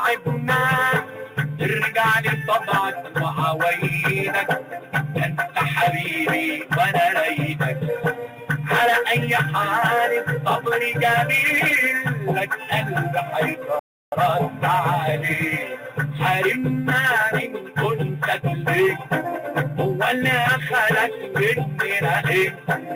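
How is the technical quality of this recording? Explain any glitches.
One glitch stands out. Rebuffering stall at 13.79 s: playback ran dry awaiting data, leaving about 0.33 s of silence before resuming exactly where it stopped, adding time without losing sound.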